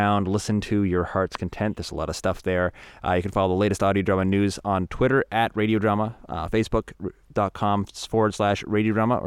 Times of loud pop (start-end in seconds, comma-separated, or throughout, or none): 1.35-1.37